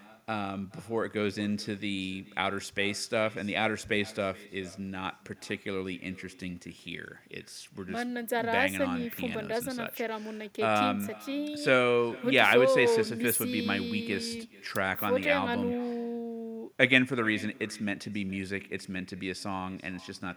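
Speech runs for the whole clip with echo with no canceller: every phrase returns around 400 ms later, about 22 dB down and thinner. The far end's loudspeaker feeds its microphone, and nothing subtracts that acoustic path before the signal travels back.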